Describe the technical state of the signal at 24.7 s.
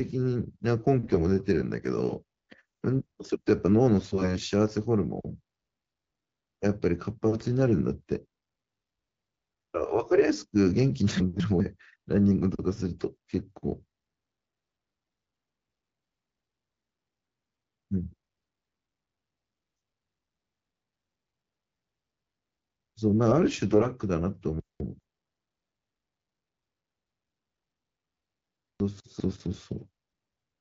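At 24.7 s there are chunks out of order (24.6 to 25.0 s). A 200 ms chunk plays one chunk late, swapping places and jumbling the sound, with three hard joins that show as vertical spectrogram lines and waveform discontinuities.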